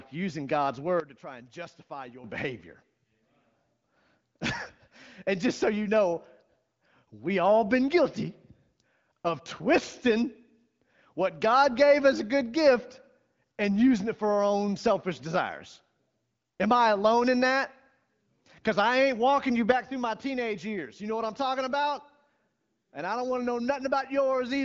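Speech heard through a band-limited wideband phone-style codec with nothing above 7.5 kHz. Speech and background together drop abruptly by about 12 dB from 1.0 to 2.24 s, then by about 6 dB from 19.72 s to the end, likely a sudden gain jump applied instantly with no ramp.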